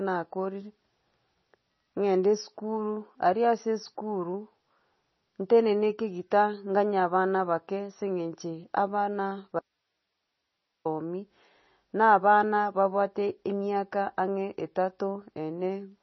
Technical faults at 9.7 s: MP3 compression; audio dropout to a faint residue

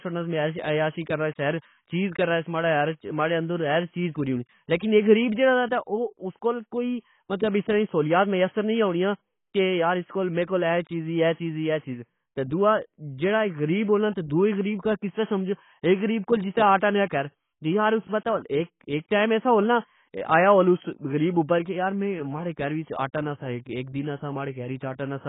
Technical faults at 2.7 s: AAC compression

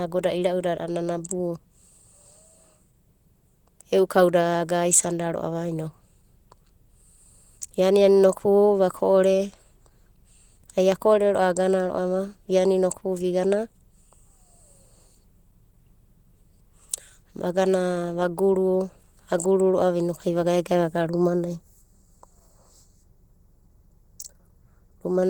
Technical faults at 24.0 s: Opus voice compression; channel delay (comb filtering)

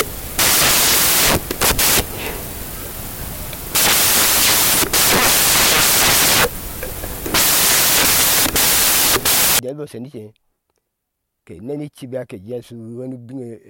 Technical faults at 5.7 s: samples built from the wrong bytes

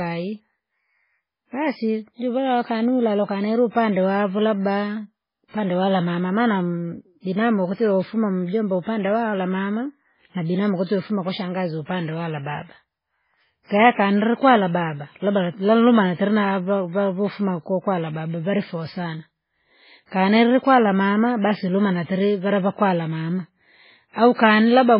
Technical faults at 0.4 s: MP3 compression

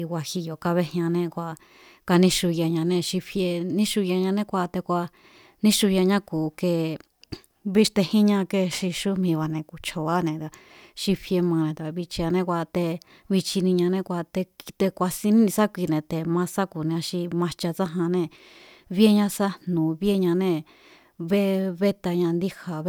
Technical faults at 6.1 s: none

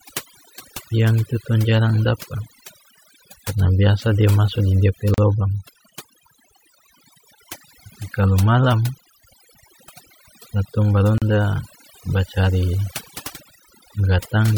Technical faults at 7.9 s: overdone noise removal

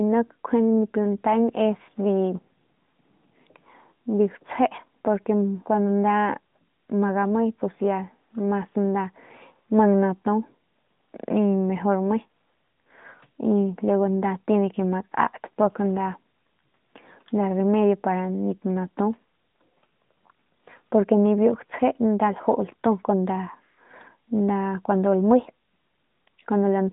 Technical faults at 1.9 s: none

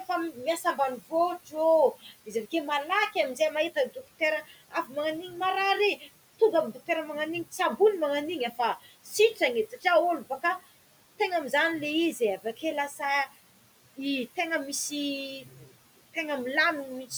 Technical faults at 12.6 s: noise suppressor artifacts; speech cut by the noise suppressor

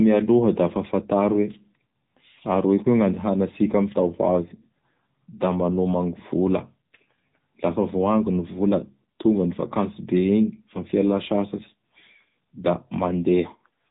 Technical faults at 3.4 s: AMR narrowband mobile codec

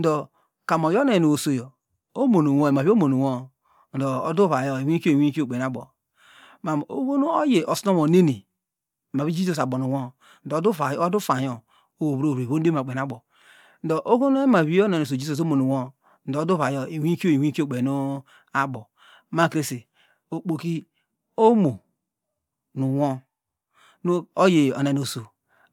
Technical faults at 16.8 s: none

